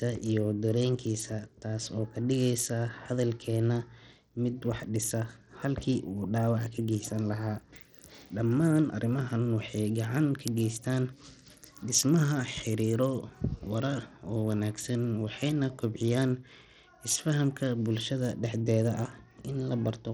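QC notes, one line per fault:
Throughout, Bluetooth SBC compression: the speech has dull, flickering treble with a gritty haze and some aliasing riding on it, likely from SBC running a small bit pool that starves the top sub-bands, which fits a bitrate around 80 kbps.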